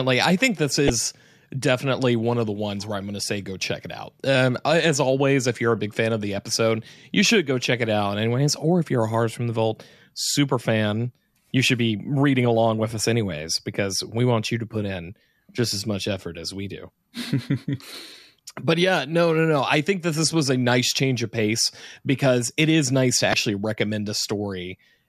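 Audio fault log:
0.87–0.90 s and 23.31–23.34 s, damaged data in a compressed stream: corrupted frames forced the decoder to resync at the next header, leaving a brief glitch after "I think this" and "it is nice to".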